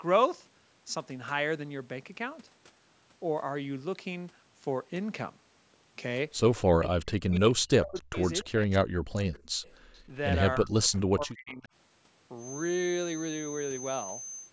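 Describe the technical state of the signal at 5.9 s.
At 5.9 s the signal is intact, with no dropout, distortion or other fault, only the ordinary band-limited sound of call microphone processing, with nothing above 8 kHz.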